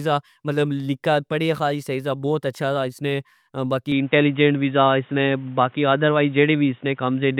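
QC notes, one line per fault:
3.92 s to end (7.40 s), input switched to a poorer device: at 3.92 s the speech abruptly turns dull and boxy, with nothing above 3.8 kHz from there on, and a faint new background noise appears well below the speech. The switch brings no gap and no change in loudness. A narrower band alone could suggest a filter or codec change, but the new noise floor and changed tone arriving at the same instant point to a likely switch to another microphone or headset input.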